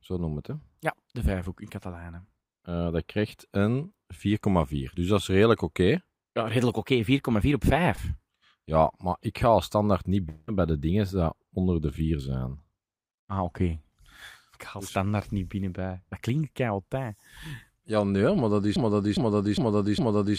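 At 7.95 to 7.99 s there is a short concealed packet loss. About 20 ms of the speech never arrived in time. The decoder extended the preceding sound for roughly 16 ms, then blended back. It is heard as a brief smear in the speech.

From 10.29 to 10.49 s, after "ga als standaard niet", comes a break that is likely a long network dropout. About 180 ms of audio is missing. A fading synthetic continuation fills the whole gap, with no silence. The speech resumes at "bij de dingen die".

At 18.76 s, right after "nee maar dat is", a broken-record loop begins. A stalled stream likely kept resending its last fragment. A 0.41 s piece repeats exactly, back to back, four times. It runs to the end of the clip, so the speech that should follow is lost.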